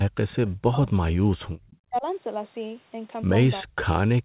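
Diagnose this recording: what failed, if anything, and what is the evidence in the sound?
Echo leak, at the call-processing stage. A faint delayed copy of the speech appears at 0.3 to 0.5 s and at 1.67 to 1.77 s. It trails by about 0.38 s and sits about 25 to 30 dB down. Likely cause: loudspeaker pickup the echo canceller missed.

Speech suppressed in double talk, also in call processing. The speech dips at 0.66 to 1.3 s, 1.84 to 2.06 s and 3.63 to 3.87 s. The drops reach about 25, 35 and 40 dB. The likely cause is an echo canceller turning the talker down while the other side spoke.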